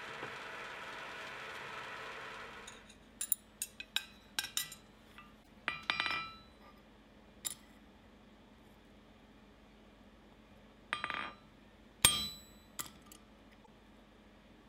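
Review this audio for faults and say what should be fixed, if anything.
Damaged data in the compressed stream produces two brief glitches, one from 5.40 to 5.48 s and another from 13.62 to 13.68 s. At each point the decoder reads corrupted frame data as if it were valid, and then finds the next clean frame header and locks back on. Unlike a buffer underrun or dropout, which leaves a clean gap or a click, this fault comes from corrupted compressed data rather than missing samples. Verifying stream integrity with checksums on each frame during transfer and storage would prevent this.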